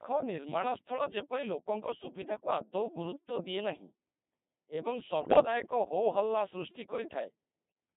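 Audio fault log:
throughout, Codec 2 vocoder: The speech sounds robotic and buzzy, heavily smeared, and confined to roughly 150 Hz to 3.7 kHz. The decoder rebuilds the voice from sine waves driven only by pitch, voicing, energy and spectral shape, never the real waveform. The sound fits a rate near 2.4 kbit/s.
5.22–5.44 s, bit errors on digital voice radio: The voice abruptly warbles and bleeps into robotic gibberish, jumping in pitch, level and tone colour. Corrupted bits, around one in ten, fed the vocoder wrong parameters for several consecutive frames, consistent with about eight.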